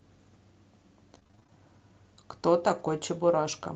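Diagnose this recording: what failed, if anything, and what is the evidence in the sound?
Network stage, repeated packet loss (robotic sound) from 1.15 to 1.51 s. Over this 0.36 s span the decoder keeps patching holes by extending the previous sound, the longest hole about 26 ms. Roughly 42% of the stretch is concealment, so the audio turns choppy. On a spectrogram, harmonics freeze into flat, smeared bands between fresh onsets. The waveform shows repeated, near-identical periods with abrupt joins at each resumption.

Network stage, a lost packet rebuilt from error correction between 2.79 and 2.93 s. About 80 ms was replaced from the low-bitrate redundant copies Opus carries in the following packets, which fits four 20 ms frames. There is no silence, but the segment sounds rougher and grainier than its surroundings. A spectrogram shows hazier, noisier harmonic detail across those frames. 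The waveform stays continuous with blurred fine structure, within the call's 8 kHz Opus bandwidth.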